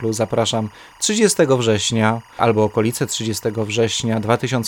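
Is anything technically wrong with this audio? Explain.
Yes. Timecode bleed runs throughout the clip: linear timecode from a nearby track or cable has leaked into the speech. It is a square wave flipping between roughly 1 and 2 kHz, which suggests 24 fps code, and it is heard as a steady chirping warble around 30 dB beneath the voice.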